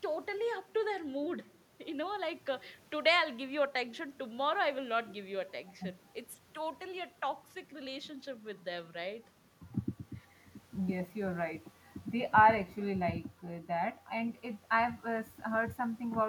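Speech recording with no audible technical faults.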